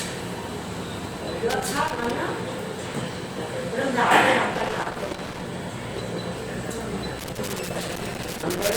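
Irregular bursts of crackle and scratching break into the sound from 1.50 to 2.17 s, from 4.54 to 5.46 s, and from 7.19 s to the end. This is loose connector crackle: a worn or dirty contact makes and breaks rapidly, chopping the signal, and any DC on the line adds pops.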